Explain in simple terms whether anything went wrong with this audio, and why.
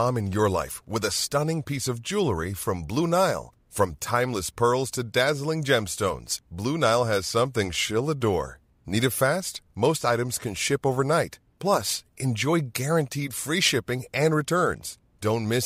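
Nothing went wrong with the recording; I hear no technical faults anywhere in the speech.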